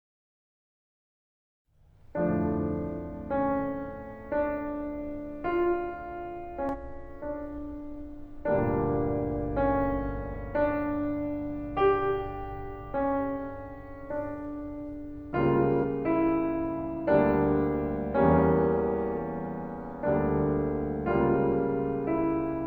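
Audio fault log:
6.69–6.75 s, 10.31–10.36 s, 15.79–15.85 s, 19.14–19.19 s: damaged data in a compressed stream. Each roughly 50–60 ms burst is a brief disruption within the music, as corrupted bytes make the decoder misread frames and lose sync until it finds the next valid frame.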